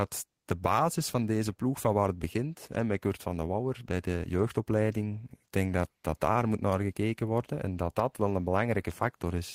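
Listening to this speech recording, nothing technical stood out at any point.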